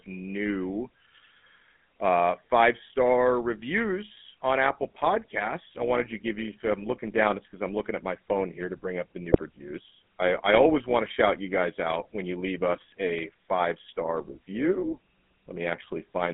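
Throughout, the GSM full-rate codec gives the speech a buzzy, gravelly roughness. The spectrogram shows energy confined between 150 Hz and 3.5 kHz, with coarse, smeared harmonics.

From 9.32 to 9.41 s, GSM bit errors corrupt the decoder's parameters, causing a brief squawking gargle. The spectrogram shows distorted, blotchy frames.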